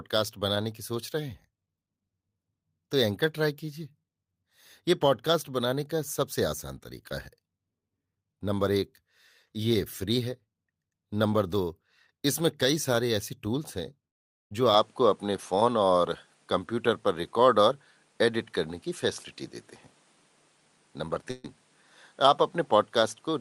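At 14.09 s the audio stops arriving for about 0.43 s, to 14.53 s, most likely a long network dropout. The receiver extends the last sound as a buzzy, hissy continuation that fades away into near silence across the gap, then resumes with roughly 420 ms of material gone. The result is an abrupt hole with a decaying tail at its start and a hard jump where the sound returns.

From 14.74 s to the end, the tone changes with no gap at the switch. The top end is cut off, with nothing above 11.4 kHz, and a faint new noise floor sits well below the signal. The overall level stays about the same. This is likely an input switched to a poorer device: the replacement capture path has a narrower band and its own background noise, so the sound turns duller and less open.

At 21.31 s a burst of packet loss removes about 140 ms, up to 21.46 s. For roughly 130 ms the receiver repeats the last sound and turns it down, so it comes out as a held buzz or a fading hiss instead of going silent. 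Playback then jumps forward, with the stretch in between missing.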